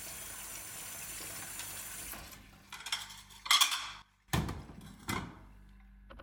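A sudden gain jump occurs from 4.02 to 4.28 s, where the level falls abruptly by about 12 dB and then returns. The background noise drops and recovers in step with the sound itself, so the whole signal is scaled rather than any one element changing. The abrupt edges point to a digital gain value switching from one sample to the next, likely a level setting applied and then released without any ramp to smooth the transition.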